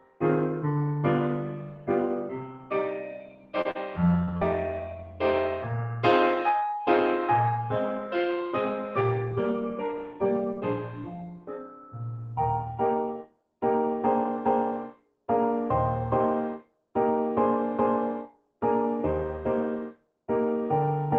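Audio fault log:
Throughout: noise suppressor applied to music or sounds. A speech-tuned suppressor keeps ducking steady content, so level swings by roughly 15 dB and the sound pumps.
0.00–0.23, 1.39–5.22, 7.99–11.98, 13.16–13.63, 14.85–15.29, 16.58–16.96, 18.25–18.63, 19.89–20.26: sound cut by the noise suppressor. Sustained parts sink by up to about 18 dB, and decays are clipped short.
3.61–3.67, 3.71–3.77, 4.25–4.29, 4.37–4.43: short concealed packet loss. Gaps of 20 to 40 ms were patched by extending the previous sound, leaving brief smears or wobbles.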